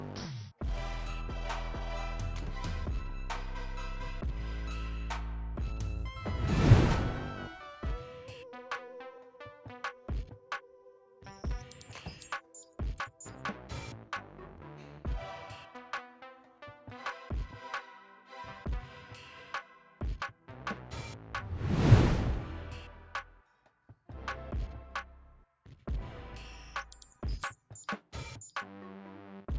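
No technical faults can be heard anywhere in the audio; the signal stays steady and intact throughout.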